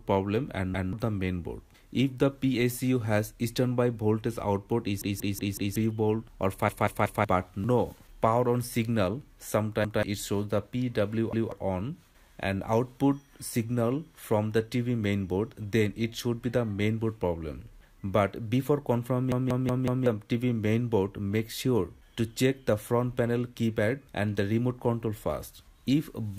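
Repeated buffer stutters hit at 0.74, 5.02, 6.69, 9.85, 11.33 and 19.32 s: a 186 ms slice replays with hard joins, four extra times at 5.02 and 19.32 s, fitting an 8192-sample buffer. Unlike a dropout, no silence appears. Identical audio loops instead.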